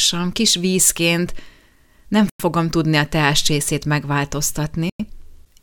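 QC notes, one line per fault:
2.30–2.40 s and 4.90–5.00 s, gap between chunks: each 2.5 s chunk is followed by 100 ms of silence, cutting hard-edged holes, the first just before "tudni a teáscsészét".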